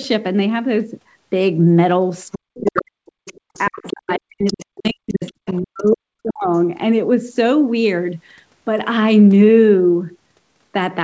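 From 2.32 to 2.82 s, a second, quieter voice sits under the speech about 10 dB down. This is the other side's voice leaking through, likely loudspeaker echo that the echo canceller left in the microphone signal. Starting at 2.4 s and lasting until 3.19 s, the main talker sinks by as much as about 40 dB. This is speech suppressed in double talk: with both sides talking at once, the canceller likely could not separate its own talker from the echo and turned both down.

The same pattern repeats. The leaked voice returns, fainter at about 15 dB down, from 3.25 to 4.13 s. The talker is turned down again from 3.69 to 5.23 s. The echo comes back from 4.45 to 5.96 s. A further suppression runs from 5.61 to 6.5 s, and a last scrap of the other voice is heard from 6.29 to 6.33 s. Across the whole clip the band stops at 8 kHz, which is consistent with G.722 on a call path.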